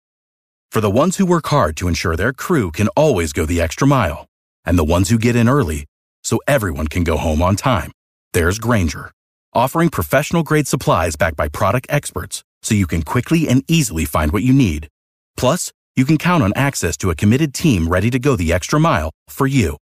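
Listening through this speech recording, nothing stood out as a technical problem.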